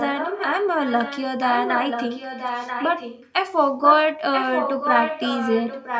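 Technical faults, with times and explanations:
0.0–1.23 s, 1.4–3.32 s, 3.82–3.93 s and 4.33–5.99 s, echo leak: a copy of the speech returns 985 ms late, about 10 dB below it in the first two spans and about 5 dB below in the last two. This is likely a speakerphone echo canceller letting residual loudspeaker pickup through.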